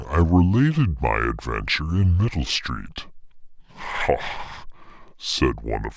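From start to finish it's a wrong sample rate problem: the speech plays at two-thirds speed and about 7 semitones low, which fits 24 kHz audio being played back at 16 kHz.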